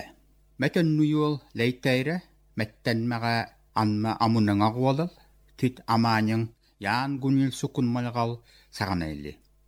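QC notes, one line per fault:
No faults heard. Nothing in this clip needs flagging.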